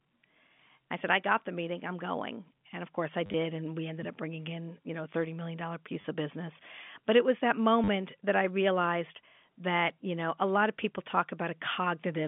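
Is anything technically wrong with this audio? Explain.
Yes. There are three short bursts of packet loss with the last packet repeated, heard over a telephone-band G.711 line. At 3.26 to 3.34 s, after "of course I", 6.01 to 6.04 s, before "of business", and 7.84 to 7.88 s, between "it was that" and "that I realized that", the receiver replays old audio, which fits 10 ms packets. Each gives a buzzy robotic stutter.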